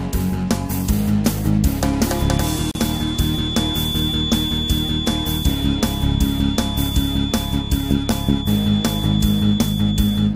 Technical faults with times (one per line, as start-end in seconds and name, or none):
2.06-10.36 feedback whistle
2.71-2.75 gap at a join of encoded pieces